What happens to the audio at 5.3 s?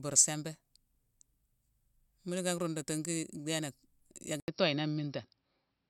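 At 5.3 s the speech sits inside a stretch of duller, narrower sound. It begins at 4.4 s, after a silence of 80 ms, and lasts to the end of the clip. Nothing is heard above 5.7 kHz, so the top end is gone. The loudness stays about the same. A faint new background noise appears, well below the speech. This is likely an input switched to a poorer device, a device that passes a narrower band and adds its own noise.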